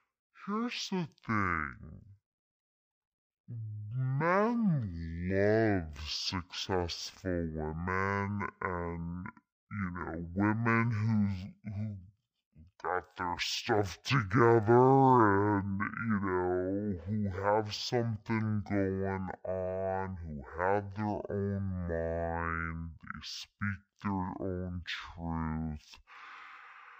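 Stereo read as mono affects this speech recording from start to finish: the left and right samples of a stereo stream have been taken one after the other as if they were a single channel, so every second of audio is stretched across two. The result plays at half speed, 0.5 times normal, and sits a full octave low, a drop of 12 semitones, with a fainter mirrored copy of the sound folded into the upper half of the spectrum.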